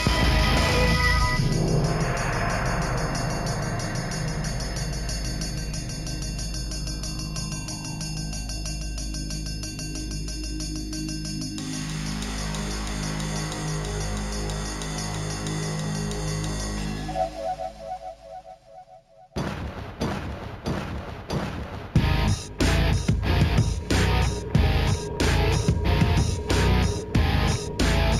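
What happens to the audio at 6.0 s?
At 6.0 s you're hearing imaging from linear upsampling, and it runs the whole clip, not just that moment. The audio was raised from 16 kHz to 44.1 kHz by drawing straight lines between samples, which filters poorly. The top of the band comes out dulled, and a mirrored copy of the spectrum lands between 8 kHz and 16 kHz, roughly 25 dB down. It shows up as a faint metallic shimmer on the brighter, sibilant parts.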